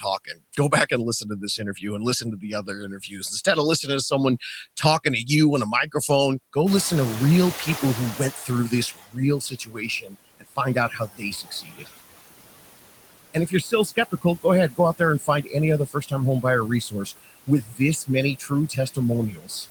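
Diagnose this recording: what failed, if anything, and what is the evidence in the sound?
Throughout the clip the background sinks between phrases and swells under them. These are noise suppressor artifacts from call processing, where the suppressor cuts the noise by about 20 dB, band by band and frame by frame.

Soft consonants and word endings sound swallowed or faint in brief stretches within 0.00–1.84 s, 2.21–3.23 s, 8.14–11.89 s, 13.34–15.55 s, 15.86–16.45 s, 16.81–18.98 s and 19.31–19.66 s. This is speech cut by the noise suppressor. It mistook quieter speech for noise and pulled it down by about 11 to 22 dB, most deeply near the start.

From 6.66 s the room noise, which jumps about 18 dB near 6.5 s, comes through with less reduction at first and then gradually sinks until 9.04 s. This is the noise suppressor catching up. Its noise estimate took 2.38 s to adapt to the louder background before reaching a cut of about 14 dB.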